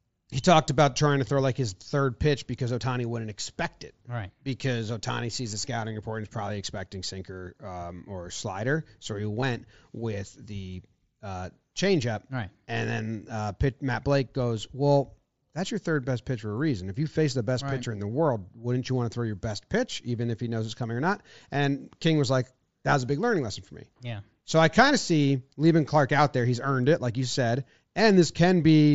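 A speech clip with concealed Bluetooth headset packet loss at 7.79 s, between "is probably expecting sinker" and "or slider", and at 9.41 s, before "with the uh changeup". Each gap, 7.5 ms and 15 ms, is patched with recycled waveform, so the first is nearly hidden and the second is a brief buzzy tone rather than the silent hole of a plain dropout.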